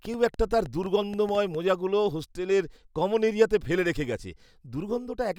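From 0.05 to 1.56 s, a train of clicks, likely interference, ticks unevenly at 6.7 per second: vertical spectrogram lines, sharp waveform spikes.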